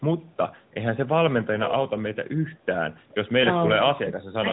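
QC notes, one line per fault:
1.62–1.73 s, echo leak: a far-end echo canceller likely let loudspeaker pickup through, so a copy of the speech returns about 438 ms late, roughly 10 dB down.
3.42–3.46 s, lost AMR speech frame: one corrupted frame was concealed by repeating the previous pitch and vocal tract settings at falling gain, giving a brief dip or warble.
3.94–3.99 s, speech suppressed in double talk: with both sides talking, the echo canceller likely turned the talker down too, so the speech drops around 20 dB for roughly 50 ms.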